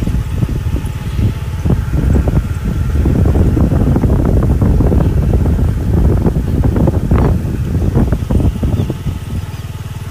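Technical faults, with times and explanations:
Throughout, low bit depth without dither: grainy, signal-tracking distortion sits about 35 dB below the sound, and quiet sounds turn gritty, which fits likely 7-bit truncation. The waveform shows visible stair-steps, and the spectrogram shows broadband hash that rises and falls with the sound.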